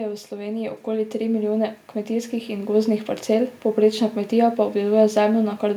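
From 0.29 s to 2.99 s the automatic gain is rising, lifting the level by about 10 dB because the control judged the input too quiet. Voice and background swell together until "parcel povprečna kmetija pa". Unlike compressor pumping, it is one slow climb that does not follow the syllables.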